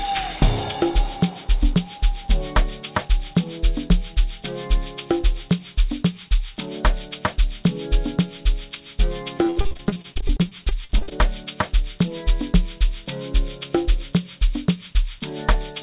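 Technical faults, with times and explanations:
9.38–11.13 s, repeated packet loss (robotic sound): about twenty short holes, the longest 59 ms, are patched by stretching the last sound, leaving a third concealed, choppy and robotic.
9.58–9.61 s, skip ahead: around 70 ms of audio is dropped as the jitter buffer catches up, so playback jumps forward, joining both sides almost directly.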